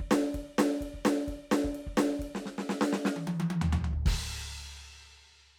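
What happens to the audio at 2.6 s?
Nothing goes wrong at 2.6 s; the music plays through that moment intact, with no audible fault.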